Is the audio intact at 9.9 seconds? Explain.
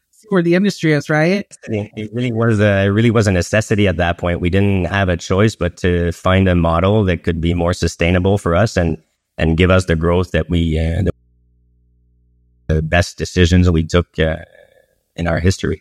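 Yes, at 9.9 seconds the speech runs intact, with no dropout, click, distortion or other fault.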